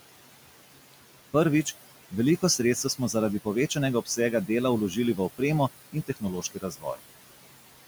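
Noise suppressor artifacts run through the whole recording. The room noise sits about 15 dB below the speech, and the suppressor pulls it down by about 17 dB frame by frame wherever it judges a band to be steady noise. As a result, the background drops away in the gaps and comes back up beneath the speech.

Speech cut by the noise suppressor occurs twice near the end. From 5.92 to 6.23 s, just after "v opremo", the suppressor mistakes part of the speech for noise and lowers it by up to about 16 dB, over roughly 150 ms of that span. From 6.42 to 7.0 s the same happens more heavily, with drops of up to about 18 dB across roughly 400 ms. The affected speech in both stretches sounds swallowed and faint.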